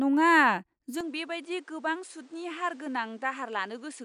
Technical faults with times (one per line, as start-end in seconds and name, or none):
1.01-4.05 input switched to a poorer device